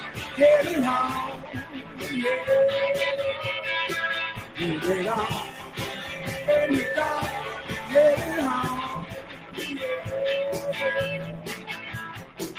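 A speech-oriented noise suppressor stays active across the whole clip, treating sustained and ambient content as noise, so the level swings by around 10 dB as it clamps down and releases, giving a pumping, thinned texture that never settles. In specific spots it cuts harder, with the sound cut by the noise suppressor dropping by about 6 to 9 dB at 0.00–0.38 s, 1.32–2.03 s, 4.38–4.59 s, 5.48–5.78 s, 7.58–7.91 s, 9.04–9.58 s, 11.38–11.69 s and 12.08–12.40 s, where held material sinks and decays are truncated.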